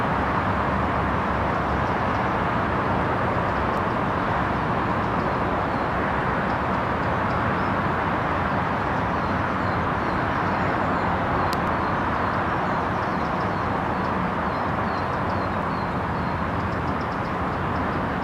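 Audio missing between chunks at 3.77, 11.67 and 15.62 s: short skips of about 50 ms where the sound jumps forward without any silence. The spacing, in multiples of 4 s, points to a likely cause of audio processed in 4-second chunks, losing a slice at each handover.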